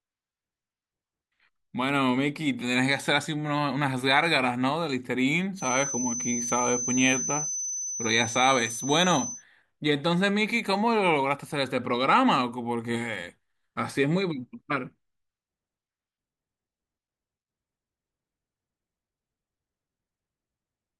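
A loudspeaker-to-microphone loop likely sitting at the edge of feedback causes a feedback whistle from 5.54 to 9.44 s: a thin, steady 6.1 kHz tone, wavering slightly, just under the speech.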